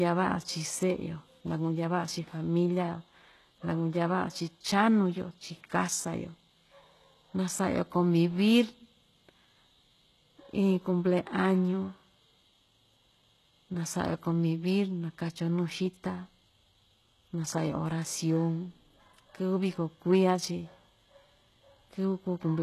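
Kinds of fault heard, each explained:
HE-AAC compression: the speech was most likely squeezed through HE-AAC at a low bitrate, which fits about 16 kbps. Only the lower spectrum is truly coded, and the treble is regenerated by copying bands upward. The damage is plainly audible: s sounds turn gritty and lispy, and nothing sits above 12.3 kHz.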